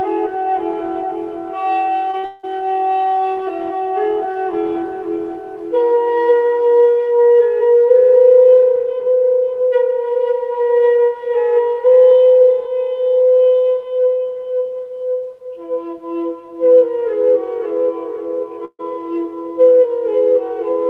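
Just after 2.1 seconds the audio smears and wobbles twice, at 2.11 to 2.15 s and 2.19 to 2.25 s. This is short concealed packet loss: about 20 ms and then 40 ms never arrived in time, and the receiver bridged each gap by extending the preceding sound before blending back. Directly after, from 2.25 to 2.45 s, a held buzz or hiss fades across roughly 180 ms and the audio resumes further on with that stretch gone, most likely a long network dropout the receiver papered over with synthetic continuation. At 18.65 to 18.81 s there is a similar held, fading sound that ends in about 40 ms of silence before the audio picks up again, the mark of a burst of packet loss: about 140 ms in a row was lost, continued and turned down by the receiver, and the content in between is missing.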